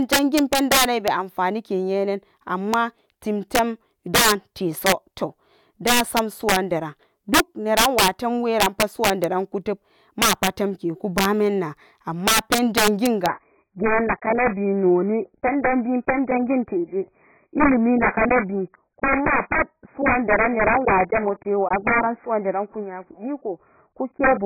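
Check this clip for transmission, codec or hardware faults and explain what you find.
Two faults are present in this speech clip: integer overflow throughout, and a drop to a lower-bitrate adaptive stream in the second half.

Integer overflow runs through the whole clip. The signal is driven about 11 dB past full scale, and instead of being limited, the loudest peaks, a small fraction of samples, wrap around to the opposite extreme. Each wrap lands as a harsh, violent crack on loud syllables, far sharper than ordinary clipping.

Adaptive stream at a lower bitrate begins at 13.27 s and lasts to the end. The player switched to a leaner version of the stream, and the sound abruptly loses everything above 2.5 kHz, turning muffled and smeared with codec artefacts. The drop fits a fall from roughly 96 kbit/s AAC to about 12 kbit/s, with no gap at the switch.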